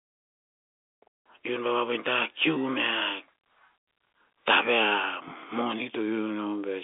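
No faults found; the speech sits in a narrow telephone band of roughly 250 Hz to 3.6 kHz with nothing above about 3.7 kHz, as expected from a normal G.711 mu-law telephone path.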